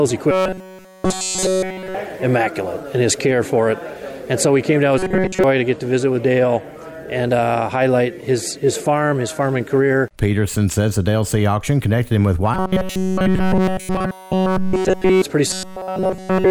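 From 0.31 to 1.94 s, 4.98 to 5.44 s, 12.54 to 15.22 s and 15.47 to 16.50 s, robotic sound from repeated short buffers: a rigid 188 Hz buzz, likely from a roughly 5.3 ms chunk repeating in place of nearly all new audio. It shows as evenly spaced horizontal harmonic lines at multiples of 188 Hz on a spectrogram, and as identical repeating cycles in the waveform.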